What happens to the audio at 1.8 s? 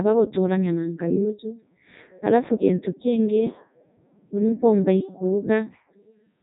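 At 1.8 s the speech is passing through a Codec 2 vocoder, as it does for the entire clip. This is not a localised event. The decoder rebuilds the speech from sine waves driven by pitch, voicing, energy and a spectral envelope, so the original waveform is gone. The result is heavily robotic and buzzy, with nothing above 3.8 kHz, which fits Codec 2's highest 3.2 kbit/s mode.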